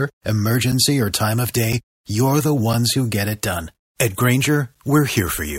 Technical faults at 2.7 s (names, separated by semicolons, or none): gap between chunks